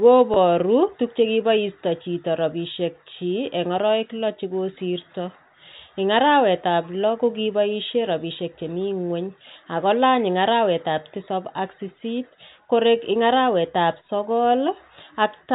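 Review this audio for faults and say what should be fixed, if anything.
At 0.34 to 0.36 s there is a brief packet loss with pitch repetition. The receiver bridged a gap of about 20 ms, consistent with one lost packet, by repeating the last pitch period, so the sound holds for an instant with a slightly buzzy, sustained quality. Unlike a plain dropout, there is no silence or click, just a momentary frozen tone. The telephone-band G.711 coding, with nothing above 4 kHz, does not cause this. Prevent it with a jitter buffer and redundancy or forward error correction on the network link.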